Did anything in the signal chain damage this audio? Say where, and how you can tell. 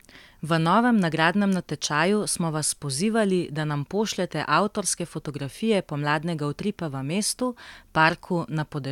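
No, nothing in the chain audibly damaged this speech, and no stage shows a fault.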